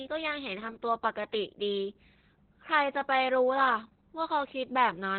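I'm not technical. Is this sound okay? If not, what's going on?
No. The speech has Opus voice compression damage from start to finish. Opus squeezes the voice into a very small data stream to save space. Here it used its basic speech mode and threw away everything above about 4.2 kHz, which is why the voice sounds muffled, like an old phone call. The heavy squeezing also makes the voice a little hoarse and slightly robotic throughout.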